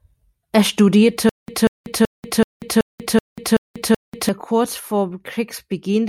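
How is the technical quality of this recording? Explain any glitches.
The recording has one clear fault. From 1.29 to 4.29 s there is a stutter with silent gaps: a 190 ms fragment repeats eight times, each followed by 189 ms of digital silence, every 379 ms. This is likely a stalled stream replaying its last buffer, so the intervening speech is lost. A waveform shows identical blocks separated by flat lines, and a spectrogram shows matching stripes with empty columns between them.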